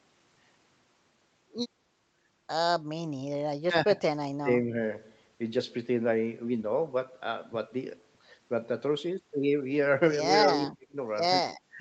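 At 3.66–4.02 s and again at 4.2–4.75 s the speech level sinks in short chunks, by roughly 25 and 30 dB, thinning and partly dropping out. A deeper cut, around 40 dB, hits 10.5–10.96 s, and a lighter dip of about 10 dB starts at 11.7 s and runs to the end. The likely cause is speech suppressed in double talk: an echo canceller that mistook the near talker for loudspeaker echo and attenuated both.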